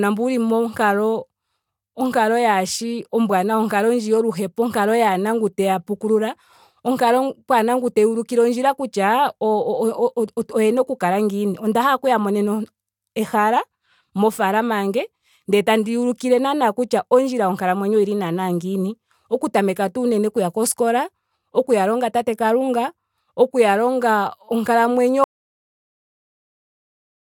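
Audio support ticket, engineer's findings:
Audio dropout to silence at 25.24 s, running to the end of the file. Speech cuts off mid-flow. Gap is silent, with no room tone and no decay. Probable component: input path upstream of the recorder. Likely cause is a lost input, such as a disconnected device, a failed link or an accidental mute. Recorder kept writing silence. Speech after 25.24 s is not recoverable.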